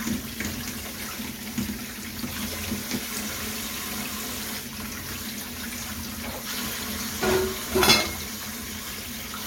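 No technical fault can be heard in this recording of sounds. Nothing in it breaks, drops out or misbehaves at any point.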